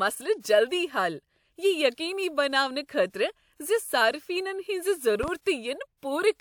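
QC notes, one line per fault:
1.94 to 6.03 s, pre-echo: at 1.94, 2.85, 5.41 and 5.97 s, a short hiss comes just before a sharp attack, lasting 37, 43, 49 and 55 ms respectively. The transform codec spreads quantisation noise across a whole block, so noise sized for the loud attack leaks into the quiet moment ahead of it, and the onset sounds soft and smeared. Unlike a pop, the hiss always comes before an attack and is never added on top of one.
5.23 to 5.31 s, loud pop: two sharp pops in quick succession, reaching around 5 dB above the surrounding sound, while the audio continues uninterrupted underneath. This is likely a sudden voltage step or pulse from a plug, switch, static or driver glitch added to the signal. It stands apart from the pre-echo events because it is a distinct percussive impulse laid over the sound rather than hiss smeared ahead of an attack.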